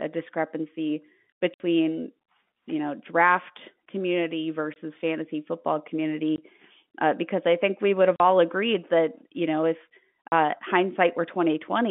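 Packet loss filled with silence cuts the speech at 1.54–1.60, 4.74–4.76, 6.36–6.38, 8.16–8.20 and 10.28–10.32 s. The hard-edged gaps run 60, 20, 20, 40 and 40 ms, multiples that fit 20 ms packets, and are true silence rather than smeared or repeated sound.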